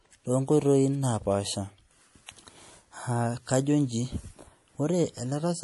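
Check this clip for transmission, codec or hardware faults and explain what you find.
One fault runs through the whole clip. The speech sounds watery and swirly, with plainly audible codec damage and nothing above 11.5 kHz. The cause is likely MP3 compression: starved of bits, the encoder cut the treble at a fixed frequency and let weak frequency lines flicker on and off between frames, which fits a low bitrate around 48 kbps.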